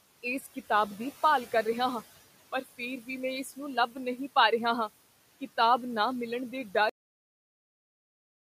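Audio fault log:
6.89 s, cut-off end: the last buffers were never written, so speech and the faint room noise stop mid-sound into digital silence, with no decay.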